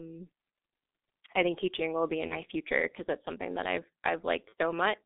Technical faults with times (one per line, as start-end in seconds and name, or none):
0.00-5.06 G.723.1 codec
2.27-2.42 VoIP packet loss concealed by the speech codec
4.49-4.53 VoIP packet loss concealed by the speech codec